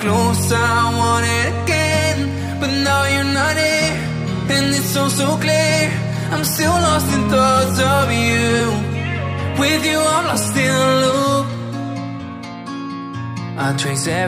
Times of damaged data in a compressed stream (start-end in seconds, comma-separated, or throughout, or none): 8.59